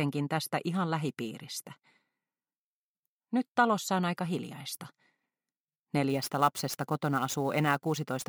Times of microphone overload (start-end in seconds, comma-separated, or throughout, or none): none